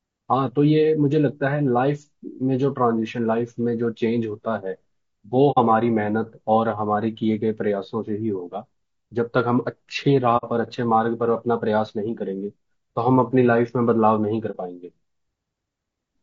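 Across the whole recording the speech has a rough, grainy texture, with noise filling the spaces between the harmonics and a top band that sounds thin and somewhat synthetic. The damage is plainly audible and points to low-delay AAC compression, likely AAC-ELD at a bitrate around 32 kbps. That codec works in very short frames, which resolve pitch harmonics poorly and spend bits inefficiently. At this rate the shortfall shows up as that grain and a weakened upper spectrum.

Three short holes interrupt the audio, at 5.51–5.58 s, 10.37–10.44 s and 14.51–14.57 s, lasting roughly 70 ms, 70 ms and 60 ms. Each is an AAC frame loss with muting: compressed frames went missing and the decoder replaced their content with silence. The longer two fit two consecutive lost frames, and the last fits one. Because the codec's overlapping windows blend into and out of the zeroed frames, the sound fades down and back up rather than cutting off, leaving soft-edged gaps.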